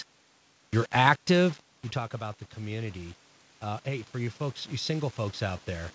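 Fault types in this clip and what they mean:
Low bit depth without dither: A gritty, grainy distortion rides on the speech throughout, roughening the quieter stretches and shifting with the signal, the error sitting only about 25 dB below it. This likely comes from rounding to very few bits without dither, consistent with about 6 bits.
Automatic gain rising: From 1.93 s to the end, speech and room noise swell together slowly rather than jumping. After the talker moved away around 1.5 s, the input fell about 14 dB, and the gain control gradually raised the level to compensate.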